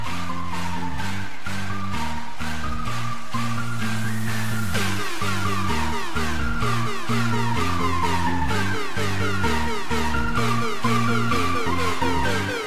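No technical faults are audible anywhere in the audio.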